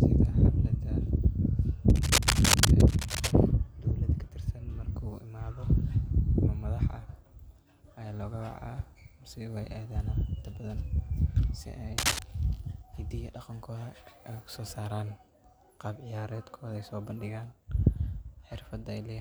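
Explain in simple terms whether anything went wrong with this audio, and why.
Two stretches of cable scratch noise break into the speech: one from 1.90 to 3.32 s, and a shorter one from 11.98 to 12.22 s. Each sounds like rough, uneven scratching or rustling laid right over the talking, and it's roughly as loud as the speech itself. The likely cause is a worn cable, plug or control being moved, so its electrical contact flickers and spits bursts of noise into the signal.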